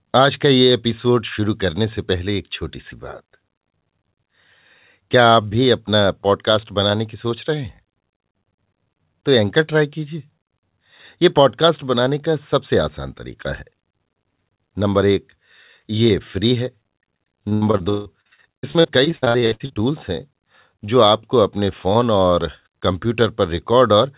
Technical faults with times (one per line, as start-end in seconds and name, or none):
17.49-19.78 repeated packet loss (robotic sound)